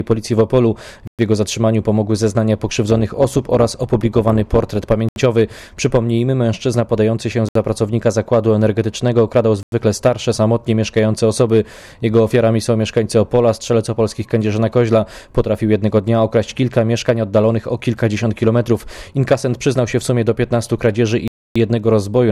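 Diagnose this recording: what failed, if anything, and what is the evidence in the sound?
The playback link drops out five times: at 1.07 s (114 ms), 5.09 s (75 ms), 7.49 s (68 ms), 9.63 s (93 ms) and 21.28 s (279 ms). Each is clean silence with the sound resuming at its place, not concealment fill, which points to a likely Bluetooth stall, with the headphone buffer running dry.

From 2.90 to 4.83 s the level pulses by about 6 dB at roughly 200 Hz, a metallic buzz with no gaps. This is overlap-add ripple in a frame-based processing stage, where overlapping windows don't sum to constant gain. Unlike the stalls, the sound never actually stops.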